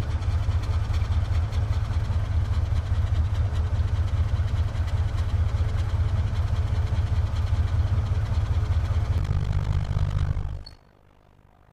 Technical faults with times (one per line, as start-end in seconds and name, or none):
9.18-11.72 overlap-add ripple